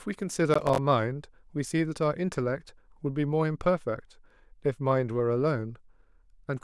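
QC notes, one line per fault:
0.54–0.78 s, processor overload crackle: a quarter-second burst of gritty tearing over the speech as about 15 tiny buffers, around 5 ms each, miss their deadline and drop to silence. The hard-edged gaps cluster densely, unlike an isolated click or a single longer dropout.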